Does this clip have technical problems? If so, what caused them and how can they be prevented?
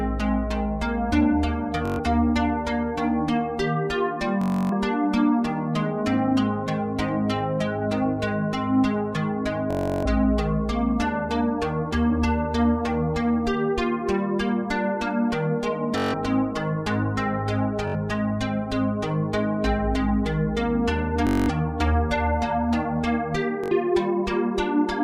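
Yes. Bluetooth stutter: packets arrived late or were lost, so the receiver replayed its last short buffer. This produces a buzzing stutter at 1.86–2.00, 4.42–4.73, 9.71–10.06, 15.98–16.14, 17.88–17.96, 21.27–21.49 and 23.64–23.72 s before the sound resumes further along. Keeping the devices close, with no obstacles or 2.4 GHz interference between them, prevents this.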